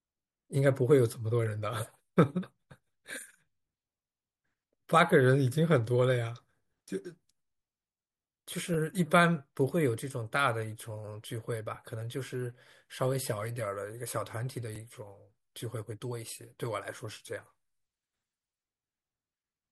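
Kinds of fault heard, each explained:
Overlapping chunks: The speech was processed in blocks of 3.0 s, and a block started before the previous one had ended. At each join, 6.5 ms of sound plays twice. This is heard as a brief click or stutter at 8.74 s and 14.76 s.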